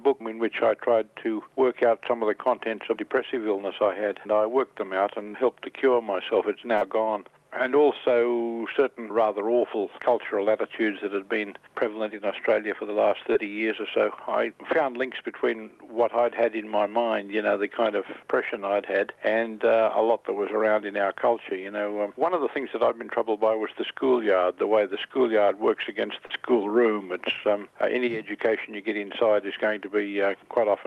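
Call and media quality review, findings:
Short concealed packet loss at 5.23 to 5.27 s, 6.77 to 6.83 s, 13.33 to 13.37 s and 26.27 to 26.39 s. Brief smears or wobbles. Receiver jitter buffer and decoder concealment. About 20 ms, 40 ms, 20 ms and 40 ms of audio missing. Gaps bridged by extending the preceding sound, then cross-faded back. Last event also stretches playout slightly, adding a little extra delay.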